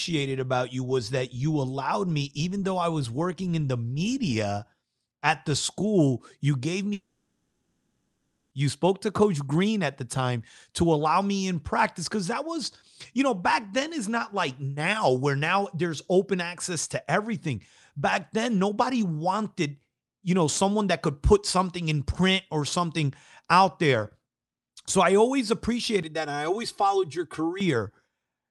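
At 6.93 s the speech breaks off and a fading, buzzy smear of the last sound carries on until 8.53 s, with the final tenth of a second or so going silent. That's most likely a long network dropout: about 1.6 s of audio never arrived, so the receiver papered over the gap and the lost stretch is simply missing when the speech resumes.

Right after "I always", from 26.03 to 27.60 s, the voice turns hollow and phasey. That's channel delay (comb filtering). One channel trails the other by around 3 ms, and summing them to mono cuts evenly spaced notches starting near 200 Hz.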